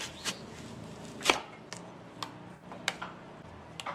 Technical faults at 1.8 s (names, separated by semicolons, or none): none